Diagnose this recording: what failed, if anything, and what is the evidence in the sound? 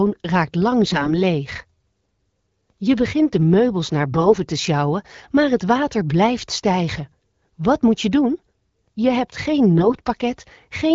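Hoarse, gargly bursts at 0.84–1.14 s, 4.12–4.37 s and 9.78–10.02 s point to AMR bit errors on the network link, where unprotected frame bits arrive flipped.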